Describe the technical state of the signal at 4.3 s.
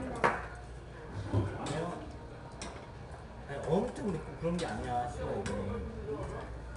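At 4.3 s the signal is passing through 4-bit ADPCM compression, as it does for the whole clip. Each sample is coded as a coarse 4-bit step from a predicted value, so the coding error rides along with the signal as broadband noise that grows with level. Here that damage is plainly audible as a gritty hiss on the louder sound, roughening sharp attacks. Nothing reaches above 10.6 kHz, which points to a low sample rate and dulls the top end.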